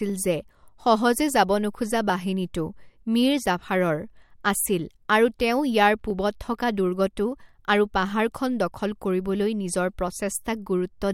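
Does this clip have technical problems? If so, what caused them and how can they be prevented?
Yes. The speech carries periodic USB or driver dropouts. A tick recurs every 2.0 s, from about 0.10 s to 10.08 s, around seven times in all. Each time, a tiny slice of audio, roughly half a millisecond, goes missing. Nothing fills the gap. The waveform jumps straight ahead, and that jump is the click. Such a fixed rhythm points to a background task that stalls the USB bus or audio driver on a timer. To prevent it, find and disable that background task, or give the audio interface its own USB controller and a larger buffer.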